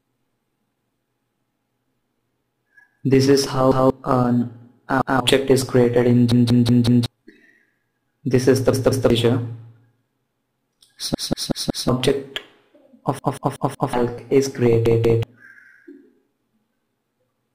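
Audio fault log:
3.72–15.23 s, repeated buffer, at 3.72, 5.02, 6.32, 8.73, 11.15, 13.19 and 14.86 s: a block of about 186 ms, which fits an 8192-sample buffer, plays again when fresh audio arrives late. It repeats once at the first two times, twice at 8.73 and 14.86 s, and four times at 6.32, 11.15 and 13.19 s, so it sounds like a looping stutter. Up to about 0.7 s of new sound is lost each time. On the waveform, identical segments sit side by side, and the spectrogram shows matching patterns split by vertical lines at each hard join.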